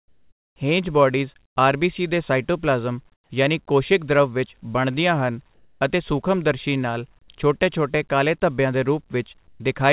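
In the pauses of this speech, the background is replaced by comfort noise five times: 0.0 to 0.56 s, 1.46 to 1.56 s, 3.14 to 3.3 s, 5.54 to 5.8 s and 9.48 to 9.6 s. The likely cause is discontinuous transmission. The sender goes quiet when no speech is detected, and the receiver fills the gap with synthetic noise. The real background turns flat and featureless. It also drops in level, by about 8, 16, 3, 1 and 6 dB. Like the speech, it stops near 4 kHz.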